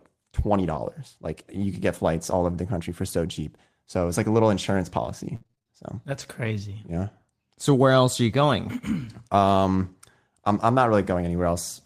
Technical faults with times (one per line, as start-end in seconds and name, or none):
0.61-0.79 lost packet rebuilt from error correction
2.43-2.53 lost packet rebuilt from error correction
5.35-6.25 repeated packet loss (robotic sound)